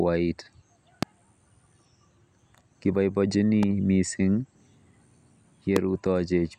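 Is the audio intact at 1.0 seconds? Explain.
No, not quite. Right after 1.0 seconds, from about 1.03 to 1.05 s, there's a single loud pop, about 20 dB hotter than the speech. It's most likely a sudden voltage step or spike, from a plug, switch, static discharge or driver hiccup, that got added to the signal, with the downstream circuitry shaping it into a brief sharp thump. The speech keeps running underneath it, so nothing's lost, but the pop sits right on top.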